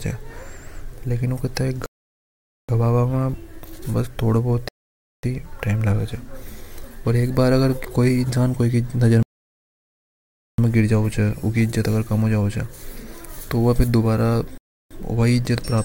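At 1.86, 4.68, 9.23 and 14.58 s the speech halts in rebuffering stalls lasting 0.83, 0.55, 1.36 and 0.33 s: playback starved of data, froze, then resumed exactly where it paused. Waveform and spectrogram show flat, empty gaps with no missing material.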